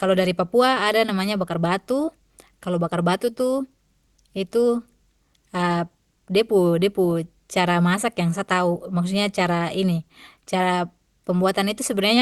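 No technical faults can be heard in this recording.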